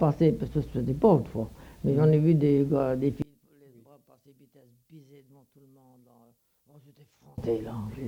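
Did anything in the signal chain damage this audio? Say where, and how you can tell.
Yes. From 3.22 to 7.38 s the level falls about 32 dB: one channel inverted, likely a miswired analogue lead, cancelling in mono. The waveform shrinks and the spectrogram dims.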